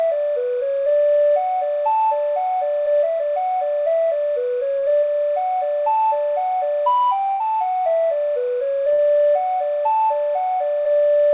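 A faint chirping warble sits behind the sound for the whole clip. This is timecode bleed. Linear timecode from a nearby track or cable has leaked in. Its square wave flips between tones near 1 and 2 kHz, roughly 30 dB below the sound. The rhythm fits code running at 29.97 frames per second.

At 4.79 s there is a short concealed packet loss, lasting to 4.85 s. About 30 ms of audio never arrived in time. The receiver filled 34 ms by extending the last sound, then blended back. It is heard as a brief smear.

Two bursts of packet loss follow. The first runs from 7.31 to 7.43 s. About 90 ms went missing, and 84 ms of continued sound covers it, fading as it goes. The second runs from 8.93 to 9.01 s, with 60 ms missing and 53 ms filled. Each time, the last sound is held as a buzz or hiss that fades out. The audio then jumps ahead. Throughout, the call path cuts off everything above 4 kHz.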